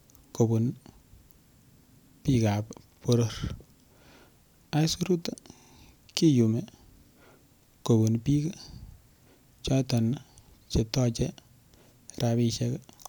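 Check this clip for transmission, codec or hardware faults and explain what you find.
Two repeated-buffer faults interrupt the speech. At 2.93 to 3.02 s and 5.57 to 5.71 s, fresh audio arrived late, so the device replayed its last 46 ms block (fitting a 2048-sample buffer), twice extra then three times extra. Each is a brief stutter. The waveform shows identical segments side by side, and the spectrogram shows vertical seams at each hard join.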